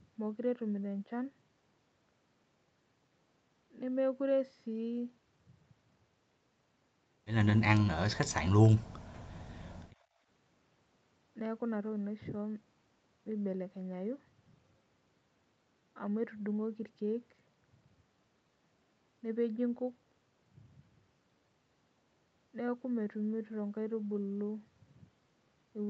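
From 7.88 to 9.07 s, and again from 9.27 to 9.77 s, the speech sinks, by roughly 40 dB at worst in the first stretch and around 20 dB in the second. This is likely speech suppressed in double talk: with both ends active, the echo canceller mistook the local talker for loudspeaker echo and attenuated both.

At 10.05 to 10.17 s the room sound dips by about 12 dB for roughly a tenth of a second, then comes back. This is background gated by the echo canceller, which clamped the microphone while the far end played and released it shortly after.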